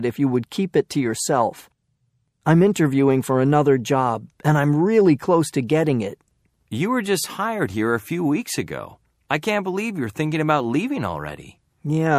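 Pre-echo appears at 2.73 to 2.76 s and again at 5.67 to 5.69 s. Each time, a short hiss rises out of the quiet just before a sharp attack, about 17 dB above the background the first time and about 11 dB the second. The smear lasts roughly 21 to 23 ms, which fits a transform window of around 36 ms with no switch to shorter blocks, so noise sized for the loud onset spills backward.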